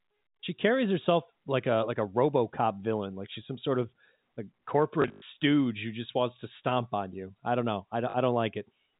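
From 5.02 to 5.22 s, after "some sort of like", packet loss with last packet repeated fills the gaps by replaying earlier audio, giving a robotic 50 Hz stutter that fits 20 ms packets. It shows as identical repeating blocks. A shorter burst follows "I don't know I" at 8.1 s.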